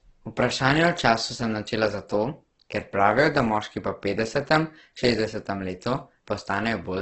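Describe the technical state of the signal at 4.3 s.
At 4.3 s the speech sounds grainy and rough, with nothing above 8.1 kHz, throughout the clip; likely heavy Opus compression at a low bitrate, near 12 kbps.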